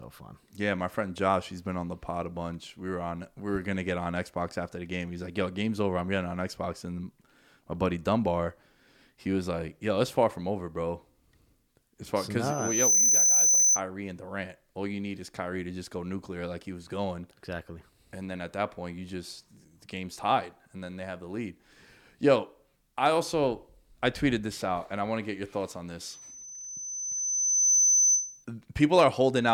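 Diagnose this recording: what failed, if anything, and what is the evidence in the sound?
A loudspeaker feedback squeal occurs twice: from 12.44 to 13.81 s, just after "far because", and from 26.04 to 28.45 s, after "get your thoughts on". Each time a single 6.1 kHz tone swells up, over roughly half a second and then about a second and a half, until it sits about 10 dB above the speech. The fault is in the analogue acoustic loop. The microphone picks up its own loudspeaker, and at 6.1 kHz the loop gain exceeds unity, so that tone regenerates by itself.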